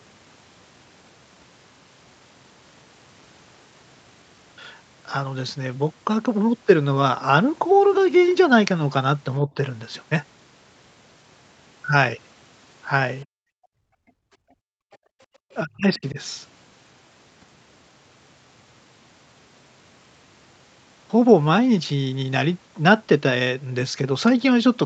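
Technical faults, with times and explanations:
9.43 to 9.5 s, speech suppressed in double talk: the speech dips by roughly 10 dB for a moment. Likely both sides talked at once, and the echo canceller turned the talker down.
13.25 to 15.35 s, background gated by the echo canceller: the room sound drops by about 40 dB for roughly two seconds. The canceller held the microphone down while the loudspeaker played, then released it.
14.92 s, other side's voice leaking through: a brief, very faint scrap of a second voice appears, around 35 dB below the speech. Likely residual loudspeaker echo the canceller missed.
15.63 to 16.18 s, speech suppressed in double talk: the speech drops sharply, by roughly 35 dB at its deepest, over about 0.4 s. Likely overlapping talk made the canceller suppress the talker.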